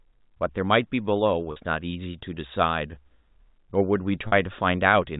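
At 1.52 s and again at 4.28 s, packet loss with pitch repetition bridges a 40 ms gap in the speech, consistent with two 20 ms packets dropping out. Each time the last pitch period is looped, giving a brief held, buzzy tone over the G.711 telephone-band audio.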